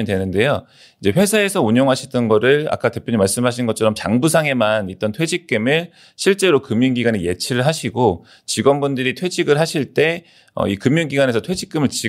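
No technical faults can be heard anywhere in this recording.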